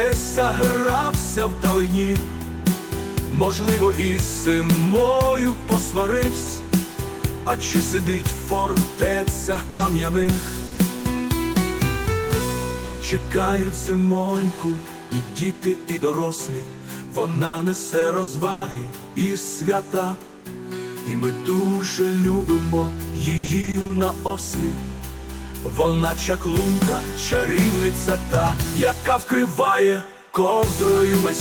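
Repeated packet loss (robotic sound) hits at 9.53 to 10.79 s, 17.45 to 18.77 s and 23.37 to 24.31 s. Packets keep going missing. Each hole is bridged by stretching the last sound, up to 100 ms. The audio turns choppy, with pieces missing.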